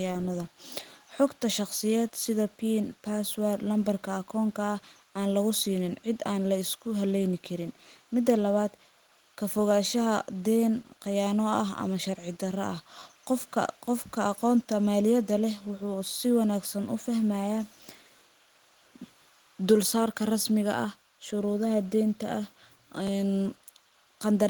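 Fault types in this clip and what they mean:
Repeated buffer: fresh audio arrived late, so the device replayed its last block, about 10.7 ms long, which fits a 512-sample buffer. It sounds three times at 12.99 s and twice at 23.07 s, a brief buzzy click with hard joins rather than a dropout's silent gap.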